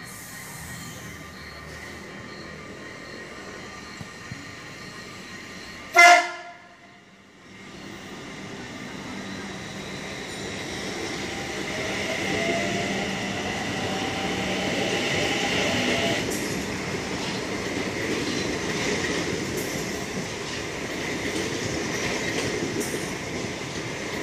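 Nothing in this recording stood out as a technical problem on listening.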